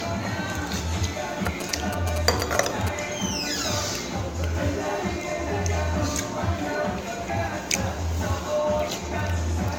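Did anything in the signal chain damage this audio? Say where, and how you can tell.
Yes, in two places. Throughout, the sound has a swirly, smeared, hollow quality and blurred attacks, worse than a single lossy pass would give, with nothing above 17.2 kHz. That's generation loss at the codec stage. It was likely re-encoded around seven times, and the band limit fits something like AAC-LC at 96 kbit/s. Each pass quantised on a shifted frame grid, so the noise and spectral holes stacked up.

From 1.46 to 2.89 s there's a galloping dit-dit-dit of short buzzes at a 217 Hz repeat rate, sitting nearly as loud as the sound itself. Those are GSM signalling bursts, picked up in the analogue wiring. A 2G phone nearby was signalling, and the audio circuit rectified its radio bursts into that buzz.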